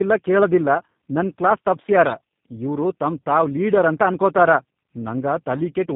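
Speech runs through tandem speech coding for the whole clip: GSM full-rate coding, then G.711, then G.729A, so two speech coders compound their losses and leave it rough, muffled and warbly. A spectrogram shows nothing above 3.7 kHz and smeared, unsteady harmonics.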